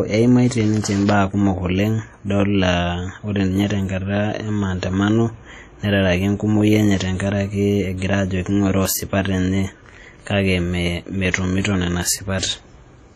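Throughout the speech there is a ringing, washy hiss that swells and fades with the signal, and nothing above 15.4 kHz. This is likely heavy WMA compression, consistent with roughly 32 kbps. From 12.39 to 12.43 s, a short hiss runs ahead of a sharp attack for 35 ms and softens it. This is pre-echo, where quantisation noise spread across a whole transform block fills the quiet moment before the attack.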